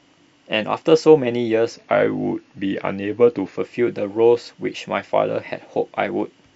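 From 1.74 to 3.58 s the speech drops into a wrong sample rate: it slows to about 0.92 times normal speed and sits roughly one and a half semitones lower, which fits 24 kHz audio being played back at 22 kHz without conversion.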